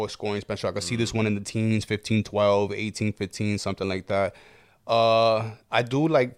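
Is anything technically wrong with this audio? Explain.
No, nothing technically wrong stands out anywhere in this speech recording.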